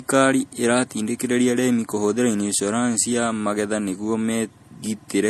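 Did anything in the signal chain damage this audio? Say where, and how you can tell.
Yes, at the codec stage, throughout the speech. Nothing sounds above 12.6 kHz, and two distinct kinds of compression artefact overlap, where a single encode would leave only one. That points to transcoding between lossy codecs, likely MP3 near 64 kbit/s re-encoded as AAC-LC near 48 kbit/s.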